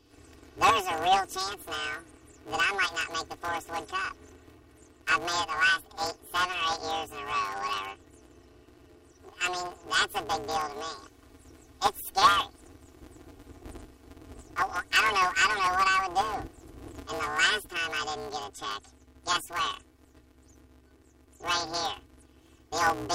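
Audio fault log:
Throughout: planar audio read as interleaved. The sound comes out as a robotic buzz at about 188 Hz, with no clear octave shift. Each block of 5.33 ms holds all its left samples and then all its right samples. The reader takes them as alternating left-right pairs instead. So every block is played twice at double speed, left half then right half. The blocks are this short, which fits a 256-sample block, so the switching repeats at the block rate and is heard as buzz.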